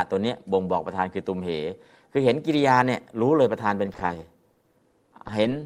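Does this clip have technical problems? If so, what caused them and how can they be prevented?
Yes. From 3.86 to 5.63 s, repeated packet loss (robotic sound) leaves some two dozen holes of up to 30 ms, each filled by extending the last sound. The speech turns choppy, and unlike a single dropout, the gaps keep recurring. A steadier connection or deeper jitter buffer prevents it.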